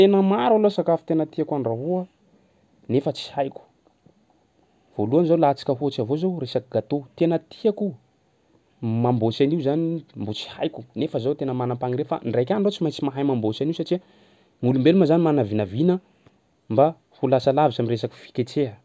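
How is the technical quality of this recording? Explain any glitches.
No glitches can be heard anywhere in this speech recording, so there are none to explain.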